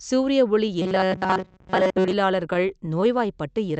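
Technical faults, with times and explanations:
0.82–2.13 s, robotic sound from repeated short buffers: the speech collapses into a rigid, metallic buzz pitched at 188 Hz that still loosely tracks the words. The likely cause is a tiny fragment, about 5.3 ms long, replayed over and over while fresh audio fails to arrive, covering most of this stretch. Unlike scattered dropouts, the effect is a continuous, steady drone rather than isolated blips.
2.54–3.34 s, scattered short gaps: about five brief holes, the longest around 10 ms, each patched by stretching the preceding sound. Together they cover roughly 50 ms, a small share of the span, and lengthen it by about 8 ms. They come through as isolated ticks and slight smears in speech that stays clear between them. That separates them from the robotic fault above, which imposes one fixed buzz on everything.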